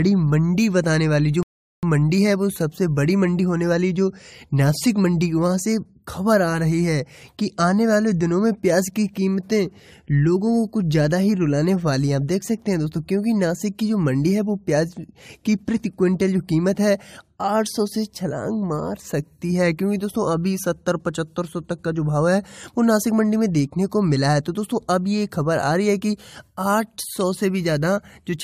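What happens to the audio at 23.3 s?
Nothing goes wrong at 23.3 s; the audio carries on intact through that moment, with no dropout, click or other fault.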